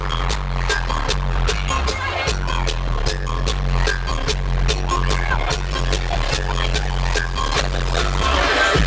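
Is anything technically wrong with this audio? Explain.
No, nothing is technically wrong.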